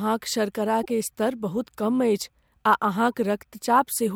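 Speech, with periodic clock jitter running through the whole clip: the converter clock wobbles at around 100 Hz, so each component of the voice carries sidebands spaced about 100 Hz either side. This is heard as a rough, metallic edge that disappears in pauses. On a spectrogram, thin ghost lines flank the harmonics and are most visible in the upper frequencies. Corrupt frame decoded faults appear twice. From 0.83 to 0.90 s, a few damaged compressed frames are played as a glitch of misplaced energy peaking near -25 dBFS. At 3.12 s, a much fainter glitch occurs, peaking near -50 dBFS. Each shows as a short, misplaced smear of energy in the spectrogram and a brief irregularity in the waveform.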